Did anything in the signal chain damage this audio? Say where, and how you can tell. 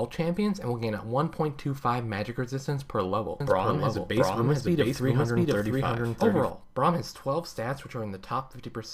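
Yes. A doubled audio track runs from 3.40 s to 6.50 s. Throughout that stretch a second full-band copy of the sound trails the original by roughly 0.7 s at about the same level. It has no decay tail or room colouring, and it cuts in and out abruptly at both ends. That points to the driver or buffer stage, where the signal was likely captured a second time through a slower path and mixed back in.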